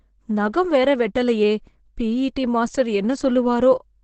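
Throughout the speech the sound is muffled and hoarse, with nothing above about 8.3 kHz and heavy codec damage. The cause is likely Opus compression running in its speech-oriented SILK mode, consistent with a wideband setting at a very low bitrate near 12 kbps.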